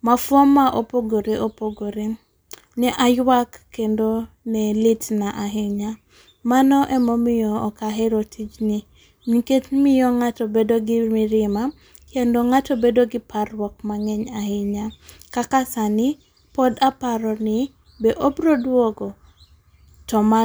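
Listening to the speech recording, nothing stood out as a technical fault at any point.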